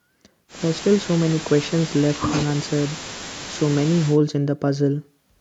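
Nothing technical stands out here; the speech comes across without any audible glitches, dropouts or other problems to point to.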